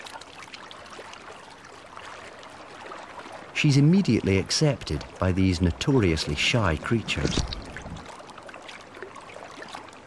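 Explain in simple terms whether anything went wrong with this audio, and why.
Nothing went wrong; no faults can be heard anywhere.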